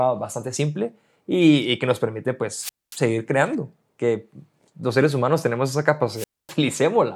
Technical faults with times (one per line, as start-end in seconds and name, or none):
2.57-3.00 wireless microphone squelch dropout
6.14-6.54 wireless microphone squelch dropout